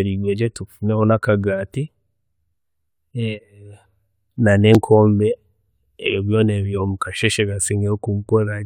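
At 4.75 s the speech has a repeated buffer: fresh audio failed to reach the output in time, so the device replayed its previous block once more. That block lasts only about 1.45 ms, which fits a 64-sample buffer, so the doubling is far too short to register as a stutter. It comes across as a single sharp click from the hard join. Unlike a dropout, no gap of silence opens and essentially no audio goes missing.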